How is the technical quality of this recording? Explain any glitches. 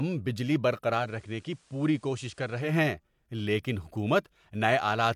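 The speech has one glitch. From 0.96 to 2.75 s the sound turns about 4 dB quieter, with hiss well below it. This is digital radio blending to analogue: the receiver lost the digital stream and cross-faded over 158 ms to the station's FM broadcast, then back.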